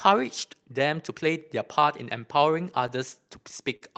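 Short concealed packet loss at 3.76 to 3.83 s, near the end of the speech: about 40 ms of audio arrived too late to decode, so the receiver stretched the preceding sound across the gap and then blended back, leaving a brief smeared wobble.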